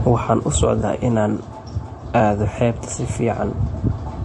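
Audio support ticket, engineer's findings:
Transcoding between lossy codecs, whole clip: speech smeared and swirly, with two kinds of artefact stacked. Spectrogram shows a hard ceiling near 11.2 kHz plus patchy, flickering high bands. Likely an MP3 stage at low bitrate re-encoded to Vorbis, which kept the lowest cut-off.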